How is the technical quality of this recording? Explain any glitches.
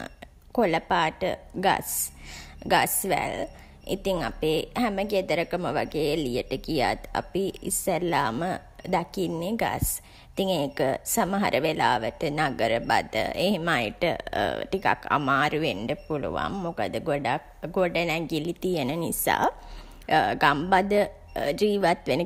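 Listening to the recording, nothing in its technical quality stood out as a glitch.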